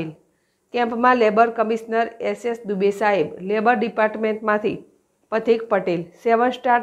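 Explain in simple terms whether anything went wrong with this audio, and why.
Nothing went wrong here: the signal holds steady the whole way through, with no dropouts, interruptions or added disturbances anywhere in the recording.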